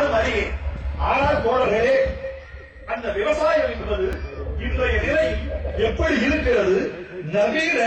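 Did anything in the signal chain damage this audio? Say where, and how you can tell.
Yes. At 4.13 s, a block of digital silence points to the driver or buffer stage: 1.16 ms of zeros with hard edges at both ends, heard as a tick.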